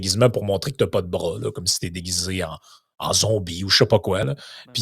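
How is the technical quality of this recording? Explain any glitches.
Nothing glitchy turns up here; the speech runs along smoothly with no dropouts, clicks or other technical hiccups to point to.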